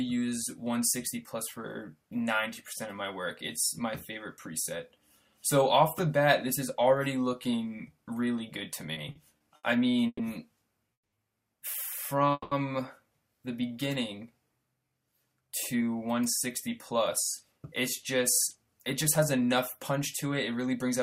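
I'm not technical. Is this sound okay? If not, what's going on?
No. From 8.93 to 10.21 s there's a repeated stall, or stutter: the audio kept arriving late, so playback ran dry five times and patched each hole by stretching the last sound, the longest for 120 ms. Nothing's lost, but it drags and stutters.

Then come two call audio freezes, at 10.93 s and 12.32 s, each a 190 ms hold-up. The first goes silent; the second drags out the last sound with only a brief silence. Likely the data was briefly delayed in transit, so the audio picks up where it paused.

From 15.41 s to the end there's a jitter buffer speed-up: to catch up on the built-up delay, the player snipped out tiny pieces, about 0.3 seconds in total. It plays roughly 5% fast at the same pitch, sounding slightly hurried.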